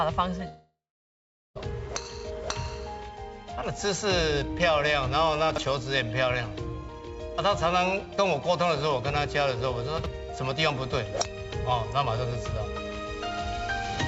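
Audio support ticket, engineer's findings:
Long network dropout, 0.48 to 1.57 s: last sound smeared into a fading buzz or hiss, then about 0.81 s of silence. Resumes with roughly 1.08 s of audio gone. Likely packet loss, covered by receiver concealment.

Chunks out of order, 5.50 to 5.58 s and 9.98 to 10.06 s: jumbled moment. A 20 ms chunk plays three chunks late, leaving hard joins. Jitter buffer or write ordering.

Call path band-limited at 8 kHz, which fits a wideband codec such as G.722.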